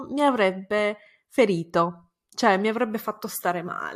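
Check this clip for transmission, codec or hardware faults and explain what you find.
No faults detected in this clip.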